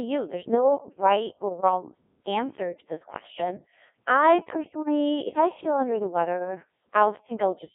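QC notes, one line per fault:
Throughout, Codec 2 vocoder. The speech sounds robotic and buzzy, confined to a 200 Hz to 3.5 kHz band. Damage is heavy. The decoder rebuilds the speech from sine waves using only pitch, voicing, energy and envelope. The sound points to about 1.6 kbit/s.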